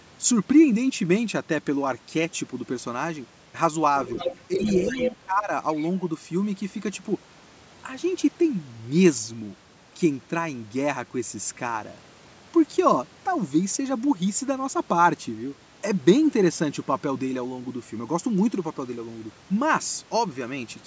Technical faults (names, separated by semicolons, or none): other side's voice leaking through; speech suppressed in double talk